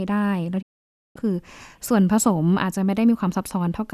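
A speech recording with a digital broadcast dropout from 0.61 to 1.17 s. The sound fades to silence over about 20 ms and stays muted for roughly half a second, consistent with the receiver discarding a run of corrupted frames before clean reception resumed. Whatever was transmitted during that gap is gone.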